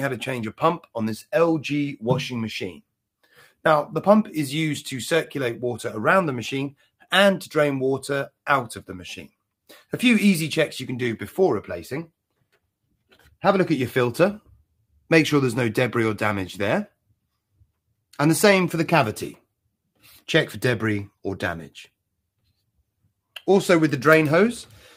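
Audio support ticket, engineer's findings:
Sound cut by the noise suppressor at 6.73–7.11 s, 12.92–13.43 s and 14.48–15.1 s. Symptom: level dips, deepest about 17 dB. Each hit touches a few hundred milliseconds of sound. Component: noise suppression stage. Mechanism: suppressor misjudges this sound as noise and attenuates it harder than the rest. Steady and decaying parts sink, tails cut short. Sharp onsets pass mostly intact.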